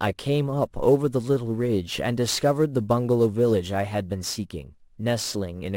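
Speech, with sample clock jitter running the whole way through: timing wobble of roughly 7 µs leaves a gritty hiss about 25 dB down, worst on loud, bright sounds.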